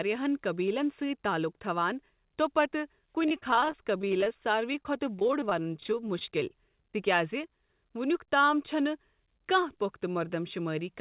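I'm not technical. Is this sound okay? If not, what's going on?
No. From 3.23 to 4.36 s and again from 4.73 to 6.95 s there is repeated packet loss (robotic sound): dozens of tiny dropouts, each patched by stretching the previous sound, making the audio choppy and mechanical.

From 7.48 to 7.50 s there is short concealed packet loss, a single tiny gap filled in by the receiver that comes across as a brief smear or wobble.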